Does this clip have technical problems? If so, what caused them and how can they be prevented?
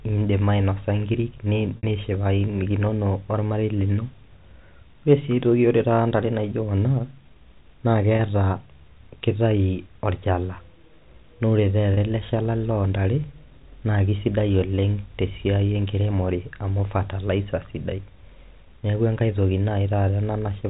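Yes: packet loss with pitch repetition at 1.77 s (60 ms, fitting two lost packets), 8.16 s and 11.94 s (30 ms each), where the receiver repeated the last pitch period, so the 30 ms gaps are a brief buzzy, held tone instead of the silence of a plain dropout, while the 60 ms gap fades into silence before the speech returns. Prevent it with a steadier network path, forward error correction or a deeper jitter buffer.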